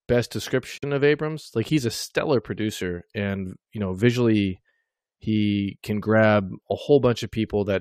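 A corrupt frame muted fault appears at 0.78 s and runs to 0.84 s, a 60 ms hole in the speech. Bits inside the compressed stream were damaged, the decoder rejected the affected frames, and playback substituted silence for them. The drop begins abruptly rather than fading, cutting the sound off mid-flow, and the timing of everything after it stays intact. The gap's length suggests two short frames were lost together.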